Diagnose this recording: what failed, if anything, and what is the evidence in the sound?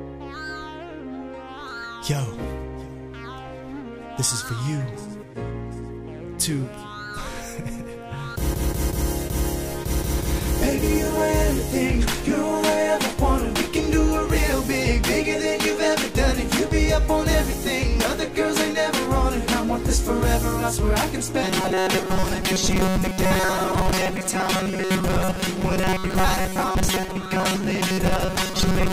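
From 21.43 s to the end, the sound becomes a rigid, metallic buzz at 188 Hz that only loosely tracks the original. This is robotic sound from repeated short buffers, likely a starved driver or buffer stage repeating 5.3 ms chunks for about 70 percent of the time.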